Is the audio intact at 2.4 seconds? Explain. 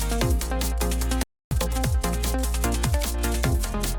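Yes, at 2.4 seconds the audio is intact, with no dropout, click, distortion or other technical fault at that moment.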